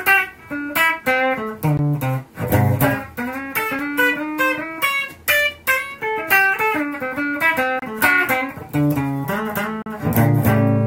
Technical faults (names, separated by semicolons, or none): gap between stream segments